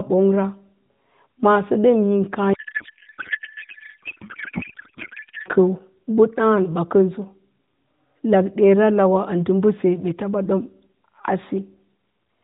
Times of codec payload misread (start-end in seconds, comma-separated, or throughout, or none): 2.54-5.49